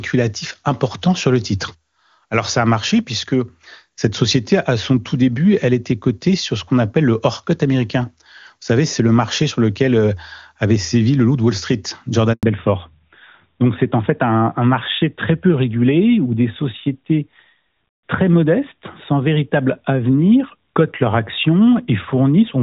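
Up to 12.33 s the call sounds like HD Voice doing its job, with the top end intact and no obvious coding grit. Then there's a handover gap from 12.33 to 12.43 s: the phone hops between networks, no speech frames get through during the switch, and the audio drops out for about 100 ms. You hear the sound fade in a few tens of milliseconds, then dead air until the new link picks up. Whatever was said in that slice is gone.

Straight after, at 12.43 s and right through to the end, you get a fallback to narrowband. The call has dropped from AMR-WB to the older AMR-NB codec, and the difference is immediate. Nothing above 4 kHz survives, so sibilants and breathiness lose their edge and the speech turns duller, boxier and rougher. The quality fits AMR-NB's top 12.2 kbit/s mode rather than one of its low-rate modes.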